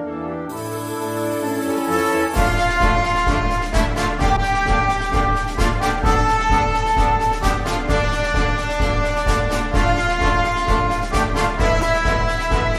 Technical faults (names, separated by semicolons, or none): corrupt frame decoded